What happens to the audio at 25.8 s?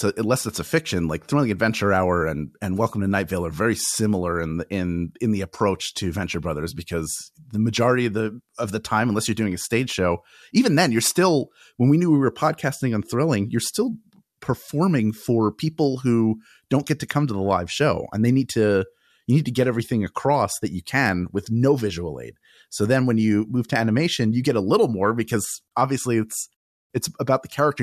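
Nothing goes wrong at 25.8 s; the speech carries on intact through that moment with no dropout, click or distortion.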